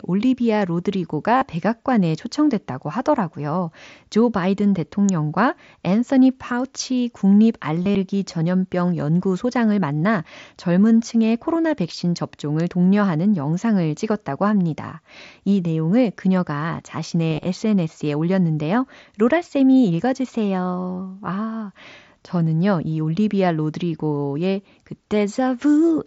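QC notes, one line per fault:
1.37–1.42 s, concealed Bluetooth headset packet loss: about 45 ms of packets lost in one burst and patched by repeating the last stretch of waveform, giving a short buzzy held tone with a slight warble as real sound resumes, not a gap or click.
5.09 s, electrical switching spike: a sharp snap laid on top of the speech right after "초청됐다고 하더라고요 조 바이든", likely an arc from a nearby switch or discharge. It is added, not a dropout.
7.83–7.95 s, concealed Bluetooth headset packet loss: 75 ms lost, scattered over 120 ms between "앤서니 파우치 국립" and "전염병 연구소장을 만나 젊은". The longest run is 37.5 ms, so brief buzzy repeats flicker through the sound rather than forming one steady tone.
12.60 s, electrical switching spike: a tight click between "젊은 층의 코로나 백신" and "독려하는 영상을 찍었다고 합니다", lasting about 3 ms and sitting on top of the signal. Unlike a concealed loss, it has no held tone.
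17.31–17.44 s, concealed Bluetooth headset packet loss: 67.5 ms lost across 135 ms in runs of at most 22.5 ms. Each gap is filled by a copied waveform, so it sounds like a buzzy roughness rather than a break. The 8 kHz-limited mSBC headset band carries on throughout with only light graininess.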